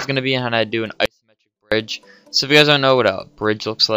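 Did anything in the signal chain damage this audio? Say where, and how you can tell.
Yes: an audio dropout to a faint residue runs from 1.06 to 1.72 s. The sound cuts out abruptly for 0.66 s, leaving only a faint leak about 40 dB down, so the downstream path stayed live. It is likely a brief break in the analogue wiring.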